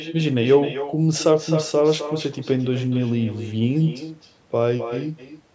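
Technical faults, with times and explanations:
Throughout, echo with no canceller: every phrase returns as a quieter, thinner copy about 11 dB down and roughly 300 ms late, the far end's loudspeaker feeding its microphone back across the network. Unlike room reverberation, it is a distinct delayed repeat, not a smooth decaying tail.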